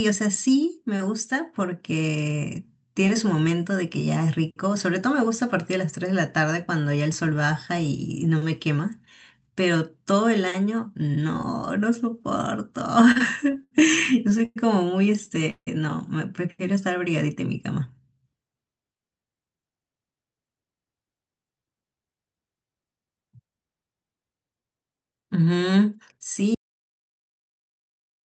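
From 13.11 to 13.73 s and again from 14.13 to 14.58 s, repeated stalls (stutter) break the speech up. The jitter buffer kept running dry, so short stretches were filled in, the longest about 100 ms. The speech drags and jerks.

At 15.50 s a call audio freeze lasts about 170 ms. The sound smears and then falls silent for 70 ms, likely from delayed packets.

From 26.55 s to the end, an audio dropout to silence cuts the speech off mid-flow into silence. The cause is likely a lost input.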